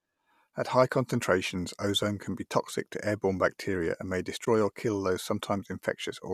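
At 4.45 to 4.47 s, just after "bacteria and may" and before "or kill these", the speech shows AAC frame loss with muting. The decoder zeroed a missing stretch of about 20 ms, consistent with two short low-delay frames (likely AAC-ELD). Overlapping windows fade it out and back in, leaving a soft-edged gap.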